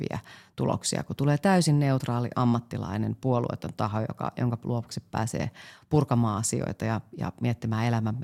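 At about 2.00 s, between "tuloksia kun tulee täysin" and "ammattilainen puolueeton taho joka", compressed frames are skipped. Around 40 ms of speech goes missing, which fits a handful of frames being dropped or rejected by the decoder.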